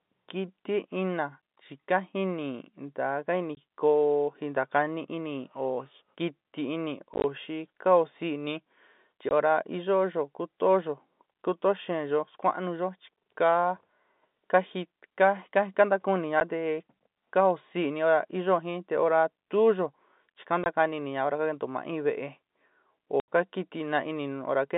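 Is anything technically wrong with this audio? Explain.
Yes. Packet loss filled with silence cuts holes in the speech at 3.55 s (20 ms), 7.14–7.24 s (60 ms scattered), 9.29 s (20 ms), 16.40 s (10 ms), 20.64 s (20 ms) and 23.20–23.28 s (80 ms). Lost packets were replaced by silence, with gap lengths in 10 ms steps that fit 10 ms packets. The gaps have abrupt edges, heard through the narrow G.711 telephone band.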